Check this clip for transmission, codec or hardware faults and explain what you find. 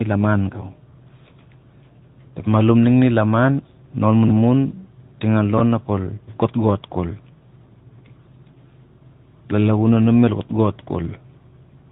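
Two faults: the whole clip has the rough, muffled, warbly quality of tandem speech coding, and there are two brief jumbled moments from chunks out of order.

Tandem speech coding, throughout: the speech is dull and grainy, with nothing above 3.8 kHz. The signal passed through CVSD at 64 kbit/s, then G.711 A-law, then AMR-NB at 10.2 kbit/s. It was decoded and re-encoded at each hop, so each coder compounded the previous one's damage.

Chunks out of order, at 4.28–4.30 s and 5.58–5.60 s: each spot is a short garbled flicker. In each case a chunk of about 10.7 ms arrived one chunk late and played after its successor. No audio is lost, but the swapped order leaves hard joins.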